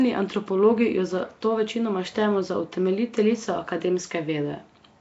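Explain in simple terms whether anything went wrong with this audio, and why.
Throughout the clip the speech sounds rough and hissy, with a smeared, underwater feel and nothing above 7.7 kHz. That is likely Nellymoser compression, Flash's old microphone codec, which spends so few bits that faint parts of the sound get replaced with noise.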